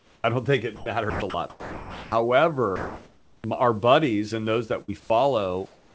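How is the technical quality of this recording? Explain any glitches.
The recording has several transmission glitches typical of a voice call with silence suppression. The speech is band-limited with nothing above 8 kHz, which fits the G.722 codec on the call path.

Comfort noise in place of the background appears at 0.00 to 0.24 s, 2.76 to 3.44 s, 4.82 to 5.10 s and 5.66 to 5.94 s. The sender likely stopped transmitting during pauses, and the receiver filled them with synthetic noise. The room's textured hiss becomes a flat, featureless noise. It is about 9 dB quieter at the start, about 2 dB quieter at the end, and unchanged in level at 2.76 s.

Onset clipped by the voice detector occurs at 0.22 to 0.24 s and 3.42 to 3.44 s. The detector was likely slow to register that speech had resumed, so about 20 ms of each onset was never sent and comfort noise played instead. Each phrase begins abruptly, without its soft attack.

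Sound chopped by the voice detector runs from 0.76 to 2.12 s. The detector likely toggled between sending and muting more than once, so about 880 ms of quiet syllables and word edges were swapped for comfort noise. The speech sounds choppy.

A burst of packet loss hits at 4.82 to 4.90 s. About 60 ms of audio was lost. The receiver stretched the last sound over the gap while fading it out, producing a brief held buzz or hiss. Speech then resumes about 60 ms further on, with that stretch missing.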